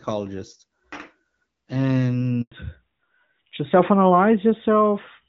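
A speech clip with a handover gap at 2.42 s: the voice dies away within a few tens of milliseconds and stays silent for 100 ms until about 2.52 s, while the call switches networks and no frames arrive, shown as a flat waveform and an empty vertical band on a spectrogram. From 2.52 s to the end there is a fallback to narrowband, from the AMR-WB HD Voice codec at 12.65 kbit/s to AMR-NB at 12.2 kbit/s, so nothing remains above 4 kHz. The voice sounds duller and rougher, and the spectrogram shows a hard ceiling at 4 kHz.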